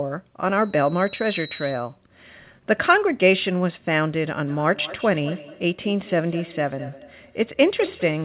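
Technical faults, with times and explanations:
0.55–1.96 s, loudspeaker feedback squeal: a whistle at 3.9 kHz takes roughly a second to swell until it sits a little above the speech. The microphone is hearing its own loudspeaker, and at that pitch the loop gain has gone past one.
4.46 s to the end, feedback echo between two devices: the speech comes back roughly every fifth of a second, thin and ringy, peaking about 17 dB under the talker. A second device in the room is replaying the call into this microphone, and neither echo canceller catches it.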